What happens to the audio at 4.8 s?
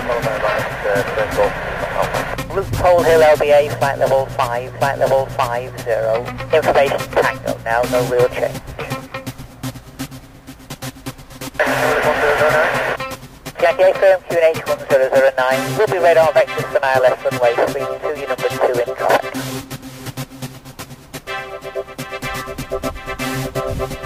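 A stream segment repeated at 4.75 s: from there to 5.75 s, a full second of the audio plays a second time. The player fetched or queued the same chunk of the stream twice, so the programme jumps back and replays that one-second stretch, adding 1.0 s to the running time. A small blip marks the seam where playback snaps back to the start of the duplicated segment.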